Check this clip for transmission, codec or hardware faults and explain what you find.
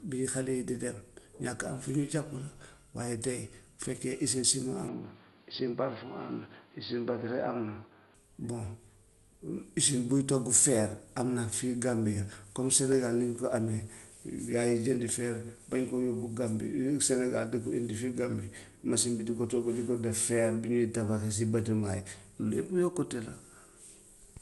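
Two faults are present: one across the whole recording and one brief episode early on.

Generation loss runs throughout. The speech sounds swirly, hollow and smeared, with blurred attacks, which fits likely repeated MP2 coding at around 96 kbit/s, perhaps seven passes, each requantising on a shifted grid. A spectrogram shows nothing above 11.9 kHz and flickering holes below.

From 4.88 to 8.15 s the input switched to a poorer device. The band narrows abruptly to nothing above 4.8 kHz, making the sound dull and boxy, and a new noise floor about 35 dB below the speech appears. The cause is likely a change of microphone or profile. The level doesn't change and there is no gap at the switch, so the waveform stays continuous while the spectrogram's upper band cuts off sharply for that stretch.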